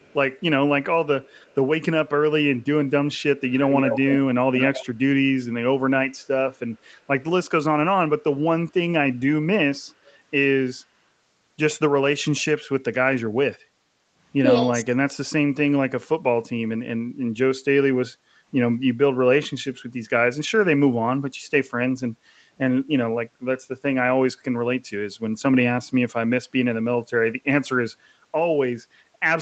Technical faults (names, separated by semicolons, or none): echo leak; speech suppressed in double talk; background gated by the echo canceller